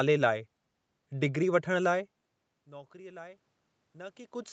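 From 2.69 s to the end of the clip, the voice and the room noise behind it swell up together over nearly two seconds. This is automatic gain rising: after the input dropped by about 23 dB, the gain control gradually turned itself up to compensate.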